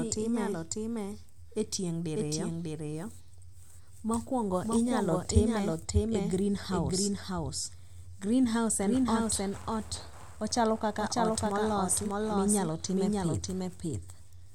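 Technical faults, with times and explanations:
Throughout, doubled audio track: the speech runs twice, with a second full-band copy trailing about 0.7 s behind at roughly the same level, dry with no decay or room sound, so every phrase gets a clean echo. Likely a second capture path or an edit overlaying two copies.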